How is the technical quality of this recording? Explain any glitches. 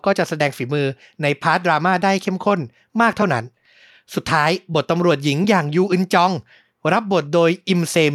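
No glitches turn up anywhere in this speech recording. There is nothing to explain, since the audio runs without any technical fault.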